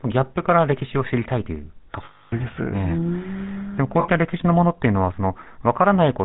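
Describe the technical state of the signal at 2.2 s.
At 2.2 s the stream is inside a run of lost GSM frames lasting from 2.04 to 2.33 s, about 0.28 s, which points to roughly fourteen 20 ms frames going missing. The decoder had nothing new to work with, so it kept reusing the settings of the last good frame. Instead of clean speech, the sound is held on a rough, metallic ring rather than moving on.

Underneath that dropout, the whole clip is passing through the GSM full-rate codec, consistent with its 13 kbps mode. The codec rebuilds speech from a vocal-tract model driven by regularly spaced pulses, keeping only every third sample of the excitation, and it passes nothing above 4 kHz. The result is a plainly audible buzzy, gravelly roughness with a dull, band-limited top, present at 2.2 s as everywhere else.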